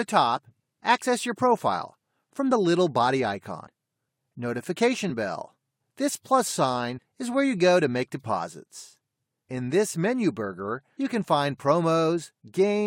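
The audio has one fault: compressed frames skipped at 6.97 to 6.99 s. Around a tenth of a second of material is missing, consistent with a handful of codec frames lost or rejected by the decoder. The audio jumps ahead by that amount at the join.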